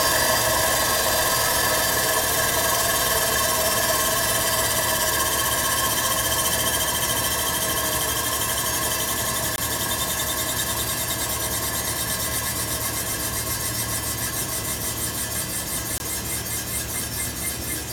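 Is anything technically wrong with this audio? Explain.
Yes. Two blocks of digital silence occur, at 9.56–9.58 s and 15.98–16.00 s, each 20 ms long. The output buffer was probably left unfilled, so the sound cuts out and returns with no fade, leaving a short hole. Unlike a faded or concealed dropout, these gaps are abrupt and completely silent.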